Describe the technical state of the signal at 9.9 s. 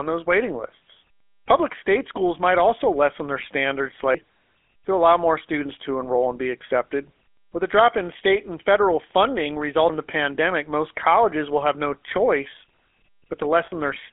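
At 9.90 s there's a skip where audio goes missing between chunks. Roughly a third of a second vanishes and the two sides butt straight together with no silence, so it sounds like a jump. The likely cause is the recorder losing a piece while swapping buffers, which fits chunks about 6 s long.

Under that, the GSM full-rate codec is running the whole time. The sound sits in a telephone band of about 300 Hz to 3.4 kHz, and there's that clear buzzy, gravelly roughness from pulse-driven vocal-tract modelling, which fits a 13 kbps stream.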